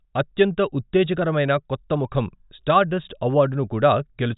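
Nothing is technically wrong with this speech recording.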